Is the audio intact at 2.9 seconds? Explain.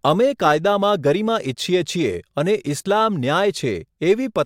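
Yes, at 2.9 seconds the speech plays through cleanly, with no audible fault at that moment.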